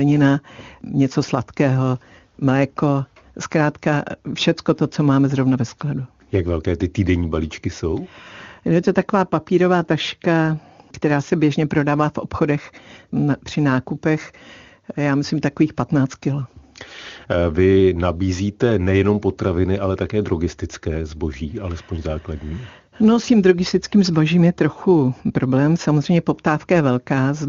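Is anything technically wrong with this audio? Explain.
No, nothing is wrong: the speech carries the band-limited but clear character of AMR-WB wideband coding, which points to its highest rate, around 23.85 kbit/s, with any coding damage faint at most.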